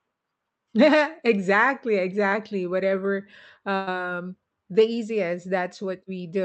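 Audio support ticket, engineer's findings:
Burst of packet loss, 3.75–3.89 s: about 0.11 s of concealed, fading held sound, no silence; audio then resumes with a chunk skipped, unlike a plain dropout. Jitter buffer/concealment on the call path.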